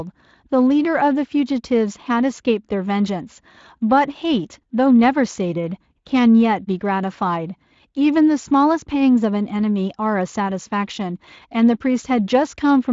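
No technical fault can be heard in this speech recording. It has passed through the Speex codec at around 23.8 kbps, which leaves only light coding texture on the voice and nothing above 7.5 kHz.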